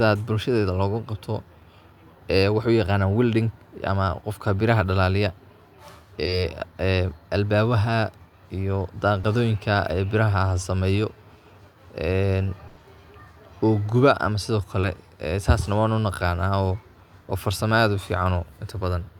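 Speech, with packet loss in the call path. Short concealed packet loss appears at 6.25–6.29 s, 9.21–9.25 s and 14.81–14.85 s. Each time, 20 ms of audio never arrived and was patched over, leaving a brief smear or wobble. A burst of packet loss runs from 12.67 to 12.79 s. About 100 ms went missing, and the receiver extended the last sound while fading it, so that stretch of speech is gone.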